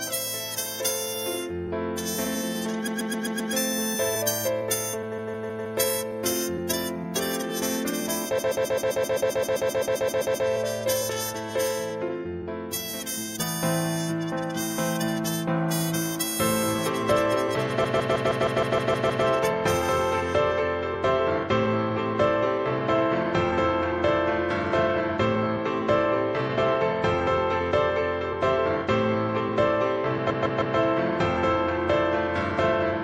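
Throughout the clip there is plainly audible MP3 compression, likely at a low bitrate around 64 kbps. Faint detail flickers in and out, giving a watery, swirling texture. Sharp attacks lose their edge and smear.

From 2.86 to 3.52 s, repeated frames cause a stutter. A block of about 131 ms plays five extra times. From 5.11 to 5.74 s, a block of about 157 ms repeats four times. From 8.38 to 10.47 s, a 131 ms block loops sixteen times. From 17.83 to 19.24 s, a 157 ms block repeats nine times. From 30.29 to 30.76 s, a 157 ms block repeats three times. Each block matches the length of a few MP3 frames. The repeats stretch the sound by over five seconds in all.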